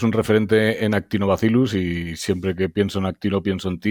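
No audible technical faults.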